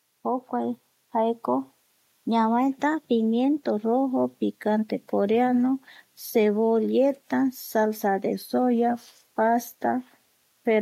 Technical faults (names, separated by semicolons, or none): low bit depth with dither; automatic gain rising; drift correction step